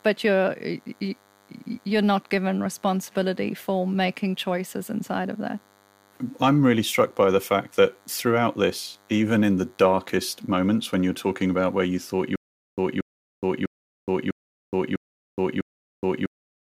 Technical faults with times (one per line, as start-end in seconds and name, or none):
0.00-16.62 DECT cordless phone buzz
12.36-16.62 stutter with silent gaps